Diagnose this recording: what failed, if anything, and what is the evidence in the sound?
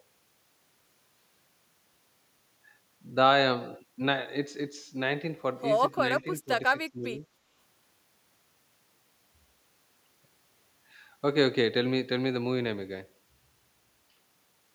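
The speech dips by about 10 dB at 6.2 to 6.52 s and 6.92 to 7.23 s, likely speech suppressed in double talk by the call-processing echo canceller.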